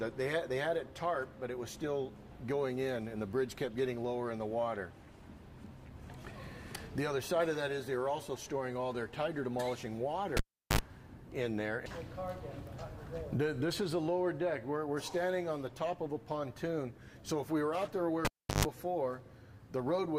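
At 10.37 s the cable gets pulled and plugged back in. There's a pop, about 370 ms of near silence, then roughly 58 ms of 50 Hz mains buzz while only the tip is making contact, and another pop as the sound comes back at 10.79 s. It happens again at 18.25 s: about 350 ms of dropout, then a longer buzz of around 130 ms before the plug seats fully at 18.65 s.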